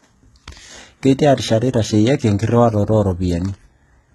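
From start to finish, the speech carries the signature of heavy low-bitrate coding, likely HE-AAC compression at a rate that points to about 16 kbps. Only the lower band is actually coded; the treble is synthesized by copying lower bands upward under a coarse envelope, so the upper harmonics don't align with those below the crossover. Sibilants come out gritty and metallic or lispy, and nothing is present above about 11.8 kHz.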